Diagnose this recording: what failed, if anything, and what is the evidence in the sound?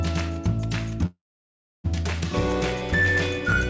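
Call audio freeze from 1.06 to 1.86 s, likely a network jitter-buffer underrun. The sound fades into 0.64 s of silence, a blank spectrogram gap, then resumes intact.

Filter restarted on every block, in call processing, from 2.35 s to the end. It produces a 125 Hz buzz, seen as regular waveform ticks every 8 ms, which fits 128-sample blocks.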